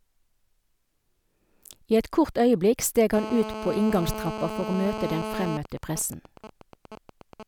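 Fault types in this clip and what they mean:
GSM phone buzz: a nearby 2G handset in a call, rectified by the audio circuit, gives a continuous raspy 217 Hz buzz about 8 dB below the speech, steady from 3.14 to 5.57 s.
GSM signalling bursts: once the phone's user falls silent, only sparse radio bursts remain, heard as even ticks with a longer buzz twice a second, quieter and broken rather than steady, 5.65 to 7.43 s.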